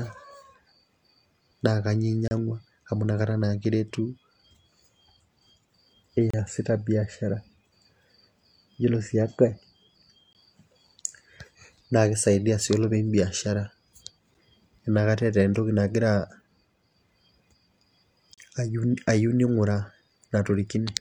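Short silent holes with hard edges cut into the speech at 2.28–2.31, 6.30–6.34, 10.33–10.35, 14.34 and 18.34–18.38 s. These are gaps between stream segments. They last about 31, 31, 20, 6 and 34 ms. Segment time stamps failed to meet, and silence filled each hole. The four-second spacing fits 4-second segments. No speech is lost.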